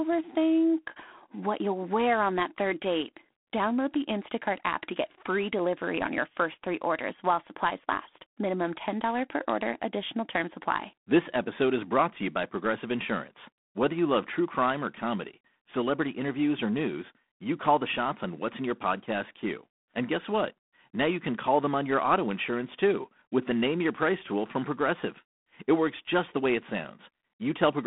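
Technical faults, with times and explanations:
Throughout, G.726 ADPCM coding. Speech carries a harsh, rasping hiss that rises and falls with its level. Nothing passes above 3.8 kHz. This fits 24 kbit/s coding.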